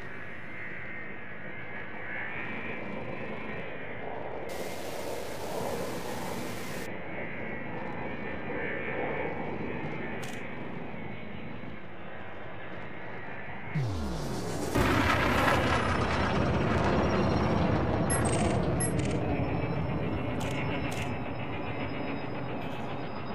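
Low bit depth without dither runs from 4.49 to 6.86 s. Across that stretch the sound turns grainy and rough, with a distortion that rises and falls with the signal. The error is loud, roughly 15 dB below the signal, which fits a resolution of about 6 bits. The likely cause is that the samples were rounded to that coarse step size with no dither to break up the pattern.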